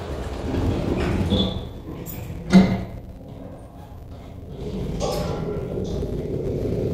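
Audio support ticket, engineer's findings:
Filter restarted on every block, whole clip: steady buzz at 188 Hz, fits a 256-sample block. Filter state reset per block, each block starting with a small transient. Unlike mains hum, the buzz follows signal level, and its ticks stay evenly spaced rather than random clicks.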